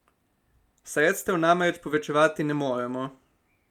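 Listening to this speech recording, nothing stood out as a technical problem.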